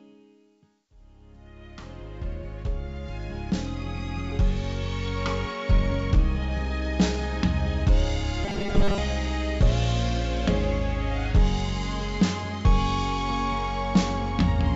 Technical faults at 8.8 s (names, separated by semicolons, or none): robotic sound from repeated short buffers